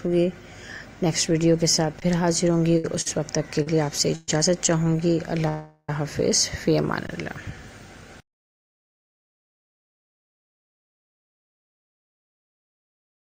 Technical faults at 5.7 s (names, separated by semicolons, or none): call audio freeze